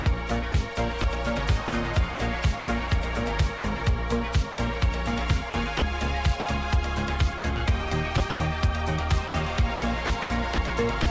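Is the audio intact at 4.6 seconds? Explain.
Yes, but only just. A voice detector most likely judged the sound to be background and briefly stopped sending it. That is sound dropped by the voice detector, from 4.52 to 4.58 s. For those 60 ms the receiver filled the gap with comfort noise, so the sound gives way to a short patch of flat, steady noise. It resumes about 20 ms before 4.6 s, so the sound at that moment is present again.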